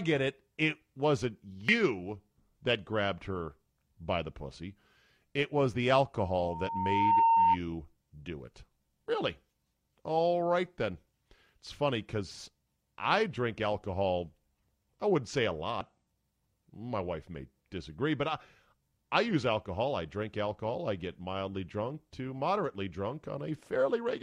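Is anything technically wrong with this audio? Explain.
Yes. Damaged data in the compressed stream causes brief glitches at 1.69 to 1.71 s, 6.64 to 6.69 s and 15.81 s. The decoder loses sync. A loudspeaker feedback squeal runs from 6.15 to 7.57 s. The microphone picks up its own speaker, and a 916 Hz tone swells over about a second to roughly 10 dB above the speech.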